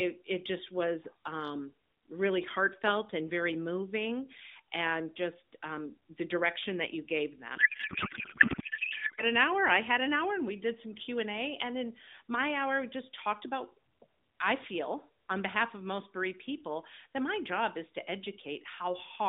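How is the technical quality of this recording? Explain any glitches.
The recording has one clear glitch: a codec payload misread. The speech is narrowband mobile audio, limited to roughly 200 Hz to 3.7 kHz. Its light coding texture fits AMR narrowband at around 12.2 kbps.

From 7.56 to 9.24 s, the speech gives way to garbled noise and warble. This lasts about 1.7 s. The sound barely tracks the speech underneath. Here the receiver unpacks each AMR frame with the wrong layout. The pattern points to octet-aligned frames being read as bandwidth-efficient ones. Every field lands in the wrong place. The decoder still builds frames that look valid, but from scrambled parameters. Normal speech returns once both sides agree on the format again.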